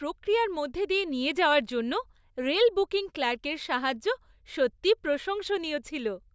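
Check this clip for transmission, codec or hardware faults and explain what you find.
No faults detected in this recording.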